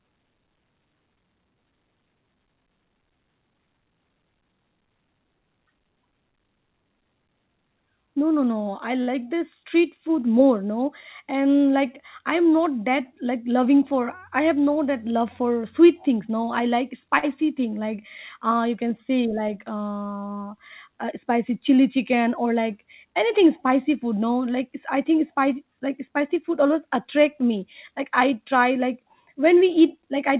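At 9.02 s a sound hangs on for about 48 ms with a slight buzz or dip, a short stall from a late packet: the jitter buffer ran dry and the receiver stretched the last sound until the packet arrived, losing nothing. From 13.13 to 13.94 s the speech briefly hurries at unchanged pitch, running about 5% fast. This is a jitter buffer speed-up, trimming roughly 40 ms of pitch periods to shed excess delay. At 17.19 s a similar stall holds a sound for about 40 ms before the speech resumes where it paused. Throughout, the band stops at 4 kHz, consistent with a G.711 A-law call path.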